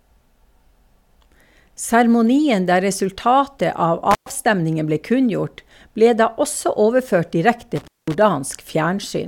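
At 4.11 to 4.30 s and again at 7.76 to 8.15 s the speech cuts out through an intermittent contact, a loose plug or cable briefly opening for about 112 ms and then 200 ms. Crackle at each edge, with faint hiss while open, sets it apart from a clean digital dropout.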